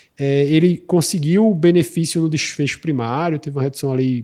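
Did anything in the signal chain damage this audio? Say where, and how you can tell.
No, nothing in the chain damaged this speech: the Opus voice compression it passed through, running in hybrid mode at 24 kbps with the full audio band kept, leaves only light coding traces, and no stage shows signs of trouble.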